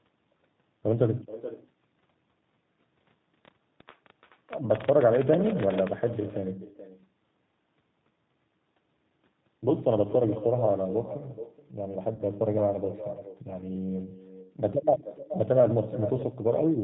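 From start to finish the speech carries an echo with no canceller. The far end's loudspeaker leaked into its microphone, and nothing removed the leak, so every phrase returns about 12 dB quieter after roughly 0.4 s as a thin shadow. A spectrogram shows each syllable's pattern repeated faintly after that gap.

The whole clip also carries plainly audible G.729 codec damage. Speech is rebuilt from a vocal-tract filter, a pitch predictor and a few pulses per half-frame at a rate that fits an 8 kbit/s codec, so it sounds rough and slightly synthetic. The spectrogram shows nothing above 4 kHz, with smeared, blocky harmonics.

From 12.15 to 12.23 s, VoIP packet loss concealed by the speech codec appears. About 40 ms of audio, which points to two lost packets, was replaced by the decoder stretching its last pitch and filter while the gain dropped. The result is a brief stretched sound that fades, and the voice stays weak for a moment after real audio returns. 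The waveform shows a tapering stretch there.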